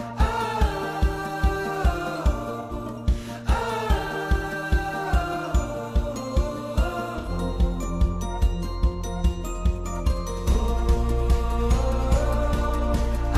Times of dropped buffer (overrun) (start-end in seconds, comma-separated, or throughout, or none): none